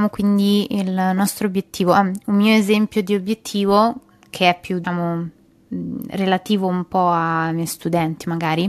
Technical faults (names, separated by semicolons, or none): damaged data in a compressed stream